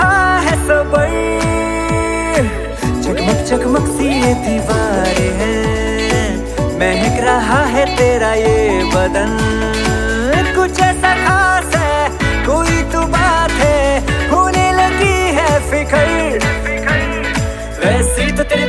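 There are no technical faults to describe in this audio.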